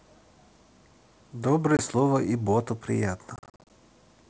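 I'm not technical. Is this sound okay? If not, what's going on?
No, there are two spots where bits of the speech drop out, and it's a fault called packet loss on an ADPCM call. Around 1.77 s a tiny gap of about 20 ms just goes silent. From 3.36 to 3.70 s it's worse: roughly a fifth of a second of sound goes missing in short holes, the longest about 40 ms, from something like twenty lost packets. Because this coding predicts each moment from the last, the sound comes back briefly slightly distorted before settling.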